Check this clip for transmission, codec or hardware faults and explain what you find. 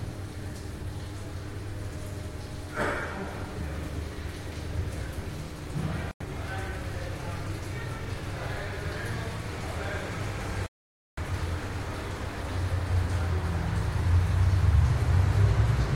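Two gaps in the audio point to a Bluetooth dropout. The first runs from 6.11 to 6.22 s, about 93 ms of silence, and the second from 10.66 to 11.19 s, about half a second. The likely cause is that audio packets reached the headphones too late to play and were discarded, leaving the output silent until usable data arrived again. Each hole cuts in abruptly or with a fade of a few milliseconds, and the sound picks up afterward as though it had kept running through the gap.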